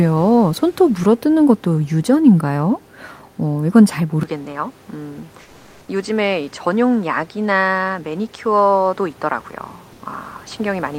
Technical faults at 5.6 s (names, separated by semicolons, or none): input switched to a poorer device; comfort noise in place of the background